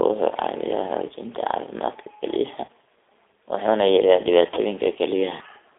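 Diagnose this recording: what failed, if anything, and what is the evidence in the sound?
The codec stage failed in the sense of audible damage: the whole speech clip went through the G.729 codec, here the G.729A variant at 8 kbit/s. The band is narrow, roughly 300 Hz to 3.6 kHz, so the top end is missing. The codec damage is plainly audible as a rough, slightly synthetic texture. The decoder rebuilds the voice from a vocal tract filter, a pitch predictor and a few pulses per 10 ms frame. The fine waveform detail is lost.

The network stage shows VoIP packet loss concealed by the speech codec. This occurs twice. At 2.65 to 2.69 s the voice is stretched and fades. That fits three lost 10 ms frames. At 4.54 to 4.60 s, just after "wuxuuna yareeyaa", the same stretched, fading sound appears. That fits two lost frames. In both places the decoder repeated its last pitch and filter with falling gain. 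Each frame builds on the previous one, so the voice stays weak briefly after packets resume.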